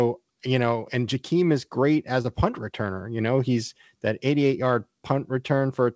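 At 2.22 to 2.26 s, between "is great" and "a punt returner", there is a short concealed packet loss: about 20 ms of the call arrived too late to decode, and the receiver covered the hole by extending the preceding sound for roughly 22 ms before blending back. It comes across as a brief smear rather than a hard gap, which separates it from a plain dropout to silence or a splice click. The band stops at 8 kHz throughout, which fits G.722 at 64 kbps.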